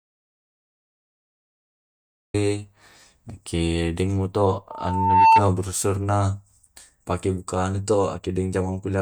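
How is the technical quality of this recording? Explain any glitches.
The recording has two clear faults: it opens in dead silence, and a feedback squeal breaks in a few seconds later.

From the first instant to 2.34 s, there is an audio dropout to silence. The gap is already under way when the clip begins and is completely empty, with no room hiss or background, before the speech cuts in abruptly. Silence like this points to a lost input. The likely cause is a disconnected device, a dropped link or a mute while the recorder kept writing. Whatever was said then is gone.

From 4.70 to 5.43 s, a loudspeaker feedback squeal rises over the speech. A single tone near 897 Hz swells over about half a second until it sits roughly 10 dB above the speech, then stops. The microphone was picking up a loudspeaker carrying its own signal. At that frequency the loop gained more than it lost on each pass, so the tone kept feeding itself.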